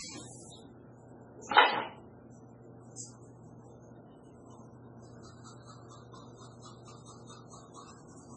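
A recording of everyday sounds, heavily damaged by what is likely MP3 compression: nothing survives above 10.5 kHz, and the audio swirls watery, which fits a bitrate as low as 16 kbps rather than simple low-pass filtering. At 2.96 to 2.99 s there is pre-echo, a 28 ms hiss just before a sharp attack. Unlike reverb or an echo, it comes before the attack, not after it.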